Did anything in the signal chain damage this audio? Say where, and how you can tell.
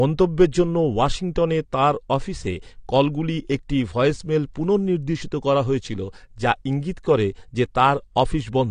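Yes. Throughout the speech there is nothing above 9.8 kHz, and the sound is dull and smeared with a warbling, fizzy edge on sibilants. This is likely AAC compression at the codec stage, fitting AAC-LC around 32 kbps, lowering its cut-off and starving bands.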